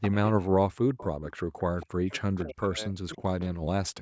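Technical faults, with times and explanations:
0.01–0.33 s, echo leak: A faint delayed copy of the speech trails the original by 273 ms. It sits about 10 dB below the direct sound. The cause is likely a loudspeaker on one side whose echo canceller let part of the pickup back into the call.
0.7–1.04 s, speech suppressed in double talk: The speech dips sharply in pieces, at worst by about 40 dB. Around a fifth of a second is affected in all. This is likely the echo canceller hearing both sides at once and turning everything down.
0.99–2.18 s, echo leak: The same 273 ms copy returns, weaker now, about 20 dB under the speech. It likely comes from residual loudspeaker pickup that the canceller did not fully remove.
1.42–4.02 s, speech suppressed in double talk: The talker keeps fading and dropping out to the end. Dips reach about 40 dB and cover roughly two seconds in total. The likely cause is the canceller confusing overlapping talk with echo and suppressing the real speech along with it.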